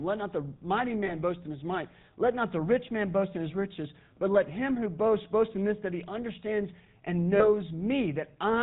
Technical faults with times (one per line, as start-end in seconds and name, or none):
0.00-8.62 GSM full-rate codec
1.06-1.11 lost GSM frames
7.36-7.49 lost GSM frames